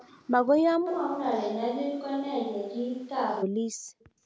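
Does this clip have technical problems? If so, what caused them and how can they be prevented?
Yes. There are three kinds of fault.

Echo leak: A faint delayed copy of the speech sounds from 0.00 to 0.11 s, and again from 4.00 to 4.05 s. It trails the original by 231 ms. It sits roughly 25 dB below the speech at first and about 35 dB below at the end. The likely cause is a far end playing the call on a loudspeaker. Its echo canceller let part of that signal through and sent it back. Prevention: the far end should wear headphones or use a device with stronger echo cancellation.

Switch to a distant microphone: At 0.89 s the speech suddenly turns roomy and hollow. It loses bass and drops about 5 dB in level. Room noise rises to around 30 dB below the speech. At 3.41 s it snaps back. This is likely because the close microphone's signal failed or was dropped, so the recording took a farther microphone, such as a camera's. 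Prevention: check the close microphone's connection and lock it as the selected input.

Background gated by the echo canceller: From 3.64 to 3.77 s the room sound dips sharply, by about 40 dB at its deepest. The dip lasts about 150 ms, then the background returns. The echo canceller clamped the microphone hard while the loudspeaker played and released it afterwards. The call's microphone processing can also be heard in the band, which ends at 8 kHz. Prevention: use headphones so the canceller has less echo to suppress.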